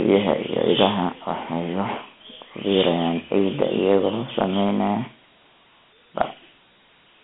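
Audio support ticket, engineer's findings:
Dialogic VOX ADPCM throughout: band-limited phone speech, 150 Hz to 3.4 kHz, nothing above 3.7 kHz. Gritty hiss riding on speech, plainly audible. 4-bit step quantisation at 32 kbps, fits 8,000 samples/s. Spectrogram: flat ceiling, empty above; noise floor rising with speech energy.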